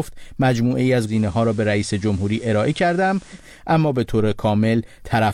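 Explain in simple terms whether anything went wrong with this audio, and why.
Yes. From 1.04 to 3.46 seconds the sound turns a touch quieter, with a faint hiss underneath, then returns to its clearer, cleaner quality. This is digital radio blending to analogue: the radio lost its digital signal and smoothly faded over about 135 milliseconds to the FM broadcast of the same station, then back again. FM carries nothing above about 15 kHz, and it brings its own background hiss.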